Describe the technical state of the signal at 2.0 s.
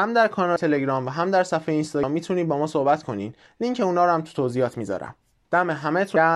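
At 2.03 s, compressed frames are skipped. The decoder plays on past a stretch of audio it never received or rejected as damaged. Roughly 200 ms of speech goes missing, and the sound jumps ahead. That gap fits about seven whole frames of around 32 ms each. You hear the speech resuming slightly further on.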